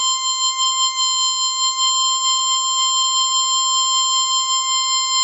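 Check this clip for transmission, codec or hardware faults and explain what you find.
One codec fault runs through the whole clip. Throughout, the music sounds dull and grainy, with nothing above 7.8 kHz. This is likely Bluetooth LC3 compression discarding upper spectrum, which fits a low bitrate near 32 kbps.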